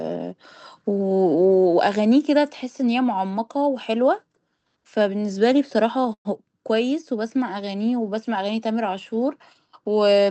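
From 6.13 to 6.27 s the sound smears into a fading buzz and silence, then resumes intact: a call audio freeze, likely jitter-buffer underrun.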